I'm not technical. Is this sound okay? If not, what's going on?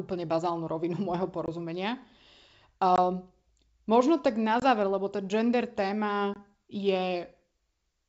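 No. There is packet loss on an ADPCM call: the speech briefly drops out at 1.46, 2.96, 4.60 (just before "lebo tá gender") and 6.34 seconds. Each time, about one packet goes missing and is replaced by silence. When the sound returns, it may click or come back at the wrong level before settling.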